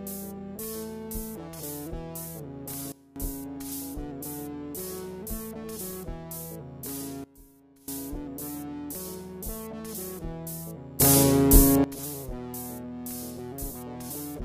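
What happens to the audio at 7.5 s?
At 7.5 s the audio sits inside a sudden gain jump running from 7.24 to 7.88 s, where the level drops by about 20 dB at a single sample and returns just as abruptly. This is likely a gain setting applied with no ramp. Unlike a fade or compressor ducking, there is no gradual slope, and the background noise falls and recovers in exact step with the sound itself, so the whole signal is simply scaled.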